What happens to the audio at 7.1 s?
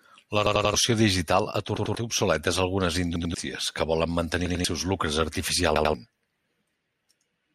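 Nothing goes wrong at 7.1 s; the speech there is intact, with no dropout, click or other fault.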